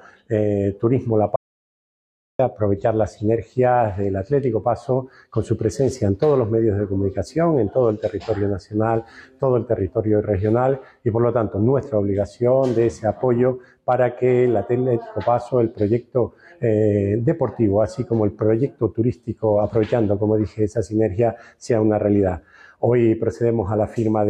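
From 1.36 to 2.39 s an audio dropout to silence removes about 1.03 s of sound, likely a lost input link; the waveform flatlines and the spectrogram goes fully blank.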